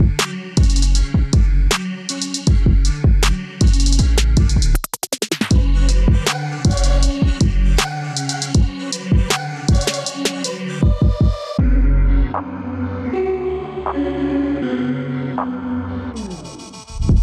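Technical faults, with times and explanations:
No technical faults can be heard anywhere in the clip. There is nothing in it that needs a time or an explanation.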